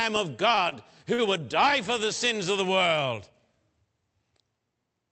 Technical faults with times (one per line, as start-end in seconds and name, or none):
0.55-0.74 short stall from a late packet
1.14-1.20 short stall from a late packet